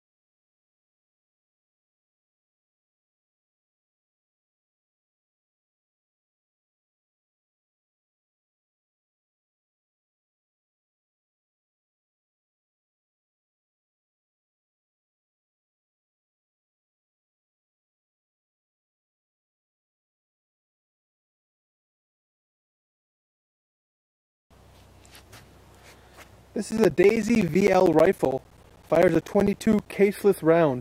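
From 26.71 to 29.93 s, periodic USB or driver dropouts cut roughly 10 ms gaps of silence every 0.064 s, producing a steady ticking. Unlike random crackle or clipping, the ticks are evenly spaced and sound only while signal is present.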